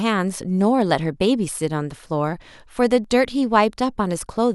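A tiny skip forward is heard at 2.06 to 2.08 s, and again at 3.04 to 3.07 s, about one second apart. This is overlap between stream segments: adjacent one-second pieces carried time stamps that overlapped, and the player trimmed the shared stretch even though the sound there was not actually duplicated. Roughly 20 to 30 ms of speech vanished each time, so the waveform jumps abruptly at each seam.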